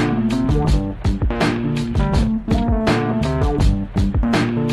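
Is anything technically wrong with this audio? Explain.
No, the audio carries no audible technical faults, and the signal stays intact throughout.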